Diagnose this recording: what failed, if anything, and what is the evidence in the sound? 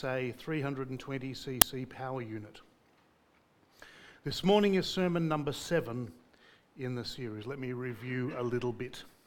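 At the driver or buffer stage, an uninitialised buffer was played at 1.62 s. A block of about 5 ms was sent out before any audio was written into it, so leftover memory contents became a brief burst of loud digital noise. On the waveform it is a dense slab; on a spectrogram, a sharp broadband vertical stripe.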